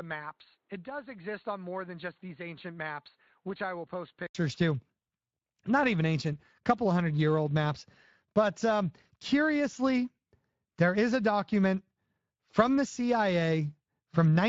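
From the start to 4.35 s, the speech is dull and boxy. Nothing comes through above about 4.4 kHz. The level sits roughly 10 dB lower, over a faint noise floor well below the voice. The likely cause is an input switched to a poorer device. At 4.35 s a short silence of about 80 ms marks the switch back, and the sound opens up.

The whole clip carries Speex codec damage. The speech sounds hoarse and noisy, because too few bits are left to rebuild the excitation. The damage is plainly audible and fits a setting near 20 kbps.

From 9.71 to 9.74 s, and again from 12.51 to 12.55 s, there is VoIP packet loss concealed by the speech codec. Each gap matches one lost 20 ms frame. The decoder stretches the last sound into a brief, fading fill. The speech stays weak or distorted just after.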